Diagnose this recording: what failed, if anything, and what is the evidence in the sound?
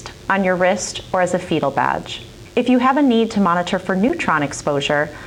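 A thin, steady buzz sits under the sound from start to finish, well below the programme level, at about 35 dB down. Its fundamental is 100 Hz, with a dense stack of harmonics that gives it a rasping edge. This is DECT cordless phone buzz entering at the analogue wiring stage. A nearby DECT handset or base transmits a short radio burst every 10 ms. The audio circuit rectifies that burst into the audio path as a 100 Hz pulse train.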